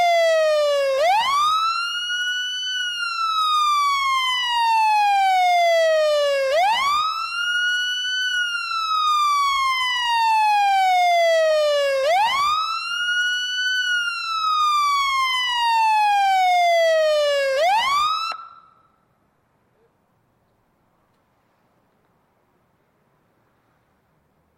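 No technical faults can be heard anywhere in this recording of sounds. There is nothing in it to place on a timeline.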